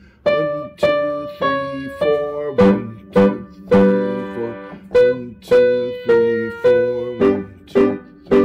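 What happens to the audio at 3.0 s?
Hard clipping is present at 3.0 s, as throughout: the signal is driven about 9 dB past its limit, so roughly 2% of samples are flattened, adding a crackly edge on peaks.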